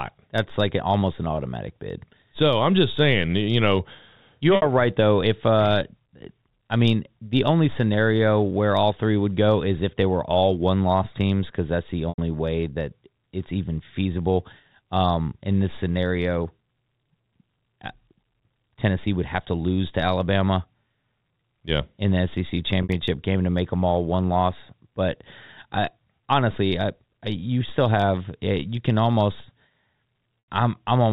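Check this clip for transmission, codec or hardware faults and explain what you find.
Four short packet losses break up this speech, each concealed by packet loss with pitch repetition. The receiver bridges each gap by repeating the last pitch period and then fading it out, so a brief held, buzzy note fades into silence and the speech returns with a short cross-fade. The losses occur at 4.56 s (60 ms, after "saying you know you"), 12.09 s (90 ms, before "way that it's even"), 22.83 s (60 ms, before "game to make them") and 30.44 s (90 ms). The 60 ms and 90 ms lengths fit two and three lost packets. The G.711 telephone coding keeps everything below 4 kHz.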